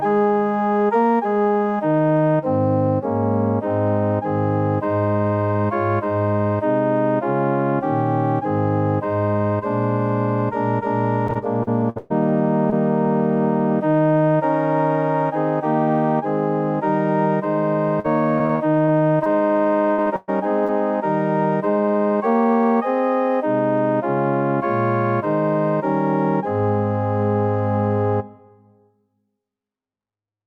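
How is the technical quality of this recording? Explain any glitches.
The recording is marred by packet loss in two areas, roughly 11 to 13 seconds and 18 to 21 seconds, where pieces of the audio drop out and are patched over.

Repeated packet loss (robotic sound) occurs from 11.27 to 12.12 s and from 18.00 to 19.27 s, each with six gaps. The receiver fills every gap by extending the last sound, so the audio turns choppy with pieces missing. The first stretch is worse, with about 30% patched and one gap of 123 ms. What separates it from isolated loss is the rapid succession of gaps.

Short concealed packet loss appears at 12.70 to 12.74 s, 20.02 to 20.08 s and 20.66 to 20.70 s, each 20 to 40 ms missing. Each is a single brief smear or wobble where the decoder bridged the hole and blended back. It is too short to fade or stretch into a buzz.

Burst of packet loss hits at 19.92 to 20.00 s (60 ms) and 20.16 to 20.30 s (120 ms). 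Here a longer run went missing, so the extended sound is turned down into a held buzz or fading hiss before the audio resumes further along. That fade-out distinguishes it from the brief smears.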